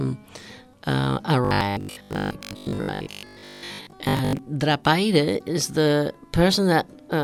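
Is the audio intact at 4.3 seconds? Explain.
No. At 4.3 s the sound is still inside a stretch of robotic sound from repeated short buffers, from 1.45 to 4.41 s. It is most likely caused by a fragment of about 20 ms being replayed in place of most of the real audio, which imposes a steady 50 Hz metallic buzz. Unlike dropouts or stutter, there are no gaps or irregular skips, just a rigid, fixed-pitch drone.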